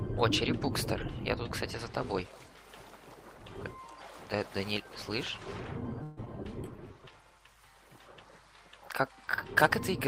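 Call audio freeze, 6.03 to 6.19 s: the last sound is stretched into a fading buzz or hiss for about 138 ms, likely because delayed packets left the jitter buffer empty, and then resumes with nothing lost. Skip ahead, at 6.25 s: roughly 70 ms of audio is dropped, and playback jumps forward with an almost direct join. Jitter buffer slow-down, 6.44 to 7.12 s: repeated pitch periods add 79 ms, and the audio plays at 89% speed, drawn out but unchanged in pitch.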